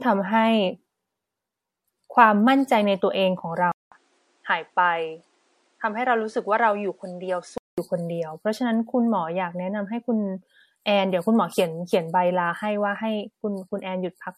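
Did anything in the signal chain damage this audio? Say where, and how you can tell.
Yes, two problems. The whole clip carries generation loss at the codec stage, likely from the audio being run through lossy MP3 encoding about four times over. Nothing is left above 16.5 kHz, and the speech has that swirly, hollow smear with soft consonant attacks, worse than one low-rate MP3 pass would give you. Each re-encode quantises again on a shifted frame grid, so the noise and spectral holes keep piling up.

Then at the input stage, from 3.72 s to 7.78 s, it sounds like the input switched to a poorer device, likely a fallback mic or a headset call profile. There's a 200 ms dropout at the switch. After that the band stops at 10.5 kHz, the level sinks about 5 dB, and a faint new noise floor sits well below the speech. It all goes dull and boxy until 7.78 s, when the fuller sound returns.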